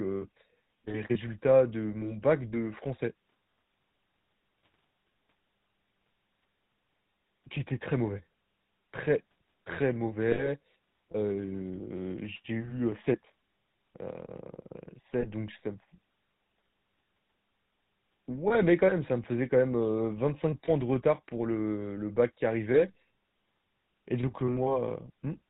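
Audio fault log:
Throughout: GSM full-rate codec. The speech has a buzzy, gravelly roughness and nothing above 4 kHz, so it sounds dull and grainy. The codec rebuilds the voice from a vocal-tract model driven by sparse, regularly spaced pulses, and the texture fits a 13 kbps GSM full-rate stream.
10.32–10.49 s and 15.20–15.24 s: lost GSM frames. Right after "très très", and again just before "donc ça me", the sound freezes into a short, rough metallic ring. The decoder repeats the last good frame's settings. The first gap points to about 60 ms of lost audio and the second to about 20 ms.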